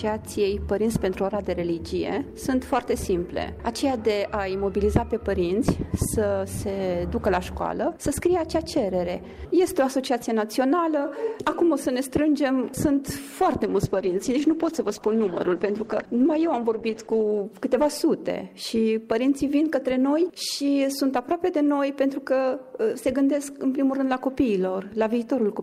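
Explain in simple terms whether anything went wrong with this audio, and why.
Between 13.65 and 17.49 seconds there is a call bitrate drop. The connection suddenly had less room, so the sound was squeezed into far less data. For almost four seconds it turns rough and muffled. Then quality returns.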